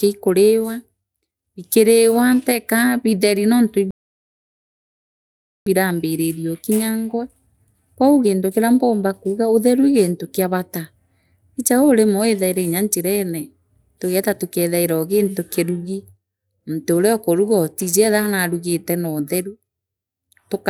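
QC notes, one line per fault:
3.91–5.66 s, playback stall: right after "bikiiriwa teka bitheri nontu" the speech cuts to silence for about 1.76 s, likely because the player ran dry of buffered data.
5.66–8.66 s, time-compressed catch-up: speech resumes hurried at roughly 1.15 times normal speed, pitch unchanged, as small cross-faded slices are dropped to clear the backlog.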